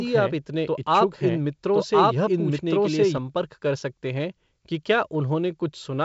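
Speech with a doubled audio track from the start until 3.18 s. A second full-band copy trails by about a second at roughly equal level. It has no decay or room colour, and it cuts off abruptly. Likely a slower second capture path.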